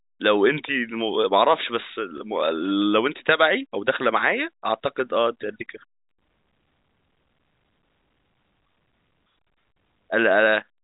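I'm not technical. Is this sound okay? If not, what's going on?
No. At 2.18 s there is a brief packet loss with pitch repetition. About 20 ms of the speech, one small chunk of data, never arrived. To cover the gap, the receiving end replayed the last cycle of the voice's pitch, so for that moment the sound holds slightly and turns a little buzzy before normal speech resumes at 2.20 s. The audio has the narrow telephone sound of G.711 coding, with nothing above 4 kHz.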